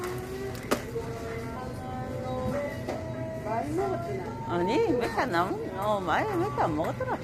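From start to finish the sound has a rough, grainy texture, with a noisy wash between its tonal parts and a top band that seems dulled or synthetic. This is likely low-delay AAC compression, AAC-ELD at a bitrate that fits about 32 kbps, whose short frames resolve fine detail poorly.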